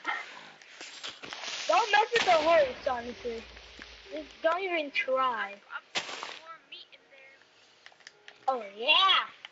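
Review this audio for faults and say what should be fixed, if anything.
Nothing in this audio needs to be fixed, as no faults can be heard.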